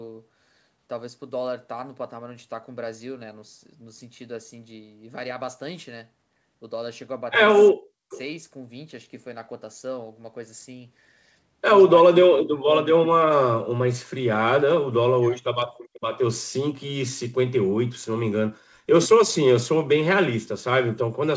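From 7.72 to 8.10 s, the speech drops out deeply. This is speech suppressed in double talk. Both sides were likely talking at once, and the echo canceller turned the near talker down along with the echo. The same dips return at 12.02 to 12.85 s, 14.82 to 15.67 s and 18.54 to 18.87 s.

At 8.10 s, a brief echo leak follows. A faint, delayed copy of the voice comes back about 0.41 s late. The far side's echo canceller likely failed to remove all of its loudspeaker pickup. A longer, quieter scrap returns from 15.77 to 16.20 s, delayed about 0.45 s.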